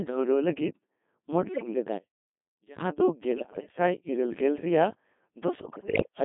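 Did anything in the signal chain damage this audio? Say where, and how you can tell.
Yes. The Codec 2 vocoder damages the whole speech clip at the codec stage. The voice is buzzy and robotic, rebuilt from sine waves, and confined to about 200 Hz to 3.6 kHz. That fits the 2.4 kbit/s mode, which sends only pitch, voicing, energy and a spectral envelope, so the original waveform is gone.

Bit errors on digital voice radio hit the link stage at 1.53 to 1.74 s, 3.38 to 3.68 s and 5.60 to 6.07 s. In these bursts the pitch, level and tone jump into warbles and bleeps. Corrupted bits, around one in ten in the first and last bursts and about 7% in the middle one, are steering whole vocoder frames.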